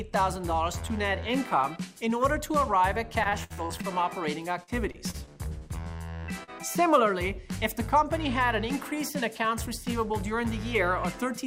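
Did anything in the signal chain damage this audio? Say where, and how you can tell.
Yes. From 3.23 to 3.86 s and 4.63 to 5.30 s the sound turns choppy and robotic. This is repeated packet loss on the network, with gaps of up to 60 ms each patched by extending the last sound.

At 6.43 to 6.50 s there is a brief smear. This is short concealed packet loss: about 40 ms never arrived, and the receiver continued the preceding sound to fill it.

From 9.14 to 10.40 s the audio runs at 104% speed with unchanged pitch. This is a jitter buffer speed-up, trimming roughly 50 ms of pitch periods to reduce delay.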